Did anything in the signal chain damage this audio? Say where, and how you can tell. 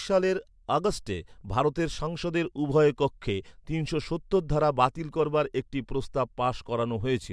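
No, nothing in the chain audibly damaged this speech recording at any stage.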